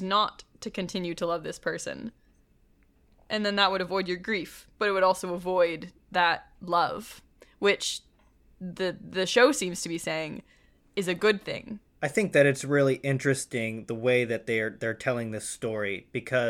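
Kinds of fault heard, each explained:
Nothing stood out on listening to this recording.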